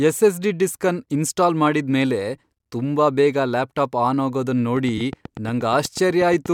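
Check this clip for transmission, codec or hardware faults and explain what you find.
Two faults show up, both in the last two seconds of the speech.

From 4.77 s to 6.47 s, right after "ಲ್ಯಾಪ್ಟಾಪ್ ಆನ್ ಆಗೋದನ್", there is a train of clicks: around fifteen near-identical pulses at a steady 8.3 per second, peaking roughly 5 dB above the speech. The likely cause is electrical interference from nearby equipment or a faulty connection or power supply.

At 4.97 s to 5.01 s a corrupt frame was concealed. The decoder caught damaged data and covered it over about 34 ms instead of outputting garbage, which fits a single frame.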